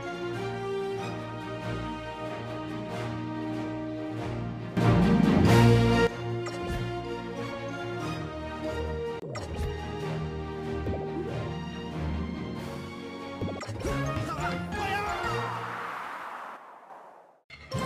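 At 4.77 s the level steps up abruptly by about 12 dB and stays raised until 6.07 s, then drops back. A second jump at 16.57 s cuts the level by about 6 dB until 16.90 s. Both are sudden gain jumps: the sound and its background noise shift together at each edge, with no fade. The likely cause is a digital gain change applied from one sample to the next without a ramp.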